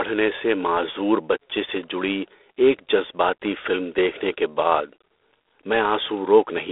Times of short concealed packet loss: none

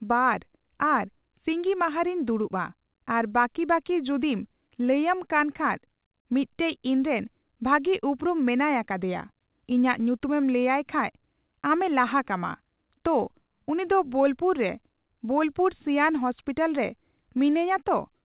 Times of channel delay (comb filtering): none

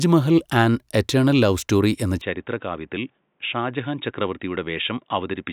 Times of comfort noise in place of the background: none

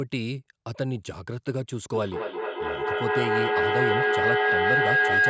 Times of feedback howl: 1.94-5.29

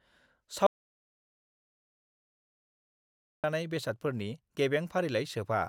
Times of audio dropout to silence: 0.66-3.44

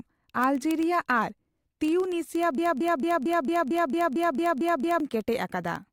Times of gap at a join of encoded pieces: none

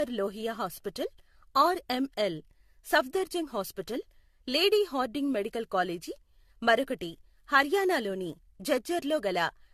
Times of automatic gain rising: none

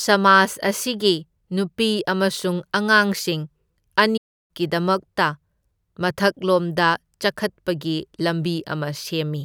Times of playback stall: 4.17-4.51

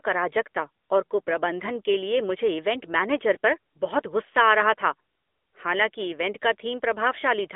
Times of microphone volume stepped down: none

